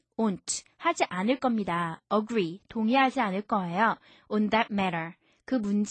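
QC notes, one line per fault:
No technical faults are audible anywhere in the recording, and the signal stays steady throughout.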